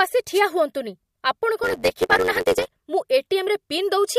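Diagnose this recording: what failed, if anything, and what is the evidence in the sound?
The FM radio link of the wireless microphone faded as reflections cancelled. The resulting wireless microphone noise hit is a brief static swish over the speech at 0.33–0.41 s.

A block size mismatch (truncated) in the driver or buffer stage discarded each block's tail. From 1.63–2.82 s this causes a 91.9 Hz buzz and speech running 1.07 times fast, which fits 512-sample writes.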